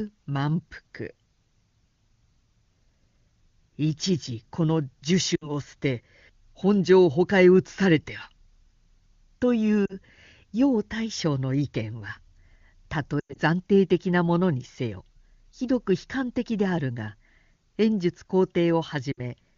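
Lost AMR speech frames occur at 5.36–5.54 s, 9.86–9.95 s, 13.20–13.39 s and 19.12–19.20 s. Corrupted frames failed their checks, so the decoder extended the last good pitch and vocal-tract settings at falling gain. Each gap drops to near silence within two frames. The 13.20 s stretch is scattered, with its longest run about 100 ms. A plain network dropout would cut instantly to silence, not smear and fade. The surrounding clear wideband speech fits a high AMR-WB rate.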